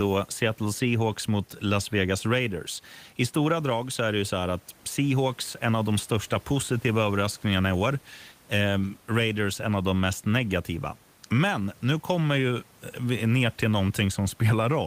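Nothing stood out on listening to this speech clip, with only a faint room noise sitting about 33 dB below the speech.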